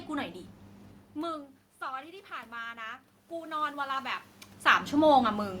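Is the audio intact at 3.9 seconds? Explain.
No. At 3.9 s the voice and the room noise are still swelling together, part of automatic gain rising from 1.14 to 4.22 s. The level at the microphone dropped by about 18 dB when the talker moved away, and the gain control slowly added about 9 dB to compensate.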